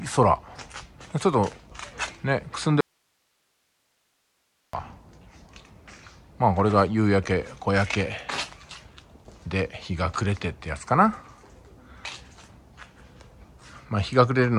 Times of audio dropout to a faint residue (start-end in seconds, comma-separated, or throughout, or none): 2.81-4.73